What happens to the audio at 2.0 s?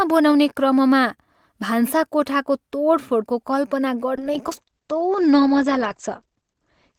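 Nothing goes wrong at 2.0 s; the speech there plays through intact, with no dropout, click or other fault.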